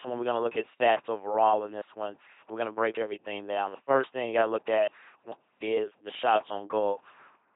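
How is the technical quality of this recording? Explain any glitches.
The technical quality is poor. The speech has been through a very low-rate parametric codec, and the damage is heavy for the whole clip.

LPC-10 vocoder, throughout: The voice is not carried as a waveform. It is rebuilt from a simple vocal tract filter excited by either a pulse train or noise, with each moment forced to be fully voiced or fully unvoiced. This produces a buzzing, mechanical robot voice, with buzz or hiss wherever the voicing choice misfires. Nothing is present above 3.8 kHz, and the result fits a bitrate of about 2.4 kbit/s.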